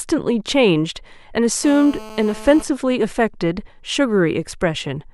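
From 1.64 to 2.63 s, GSM phone buzz: a raspy 217 Hz rasp about 17 dB below the speech, steady as during a call, showing as evenly spaced harmonic lines on a spectrogram.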